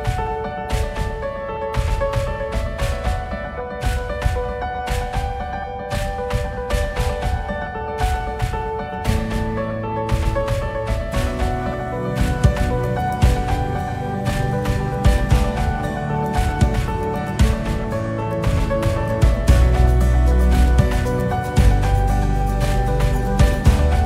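No technical faults can be heard anywhere in the recording.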